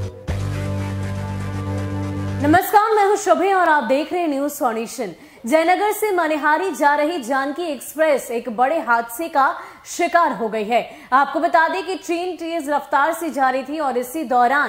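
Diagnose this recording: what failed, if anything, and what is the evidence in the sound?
Electrical switching spike at 3.66 s: a sharp snap or tight cluster of clicks, around -20 dBFS, in the analogue wiring, likely a nearby switch or discharge arcing onto the line.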